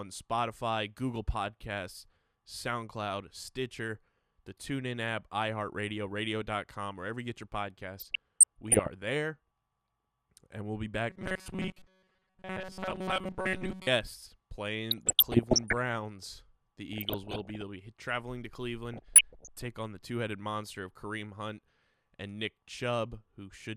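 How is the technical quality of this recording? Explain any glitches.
The recording has two kinds of glitch: bursts of DAB burbling in four places, and one stretch of robotic buzzing.

DAB burbling appears at 7.99 to 8.87 s, right after "wherever you get your"; at 14.91 to 15.77 s; at 16.93 to 17.61 s, just before "be traveling to"; and at 18.93 to 19.67 s, between "be traveling to" and "on the two headed". Weak reception let a bit error rate of around half a percent, about 0.7 percent in the last burst, slip past error correction. Corrupted samples put short blips of noise into individual sub-bands and corrupted scale factors make sub-bands leap in level.

Robotic sound from repeated short buffers runs from 11.10 to 13.87 s. The speech becomes a stiff metallic drone at 188 Hz, which loosely tracks the speech underneath. This is likely caused by audio arriving too slowly, so a fragment of about 5.3 ms was looped in place of most of the real signal.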